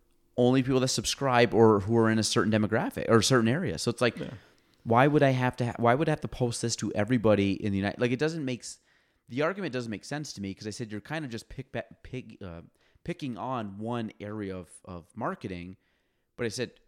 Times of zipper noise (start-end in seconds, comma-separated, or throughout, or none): 7.75-8.73